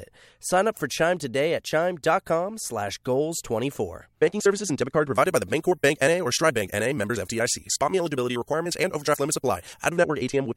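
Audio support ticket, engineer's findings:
Pre-emphasis left on, 5.14 to 9.89 s. Speech turns thin, bright, sibilant. Treble up about 14 dB at 10 kHz against 1 kHz. Shape fits a 75 µs FM curve. Recording or transmission boost applied, matching de-emphasis cut missing downstream.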